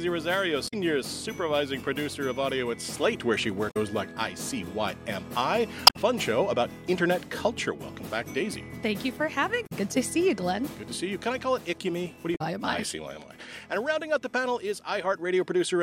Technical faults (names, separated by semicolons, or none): damaged data in a compressed stream